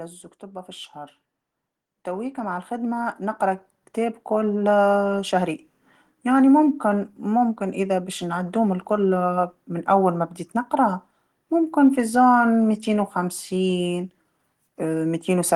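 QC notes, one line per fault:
0.39–5.43 s, automatic gain rising: the gain control judged the incoming speech too quiet and raised its gain steadily by about 13 dB over roughly five seconds, so the voice and the room noise swell together rather than the voice alone getting louder. On the waveform the envelope widens as a slow ramp across this span, with the noise floor between phrases climbing in step. A spectrogram shows every band brightening evenly, background included.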